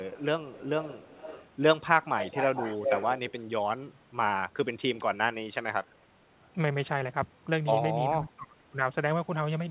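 Echo leak appears at 0.18–0.25, 0.51–1.48, 2.18–3.44, 5.86–6.04 and 6.42–6.48 s. A copy of the speech trails by 0.36 to 0.46 s, likely because the echo canceller let loudspeaker pickup through. It is faint at the edges and nearly as loud as the speech around 2.2–3.4 s. The fixed lag and distinct repeat set it apart from reverberation's smooth decay.

From 8.16 to 8.78 s, speech suppressed in double talk pulls the talker down by up to roughly 30 dB, likely the canceller ducking both talkers together. It is a level-dependent dip, not the clean gap of a dropout.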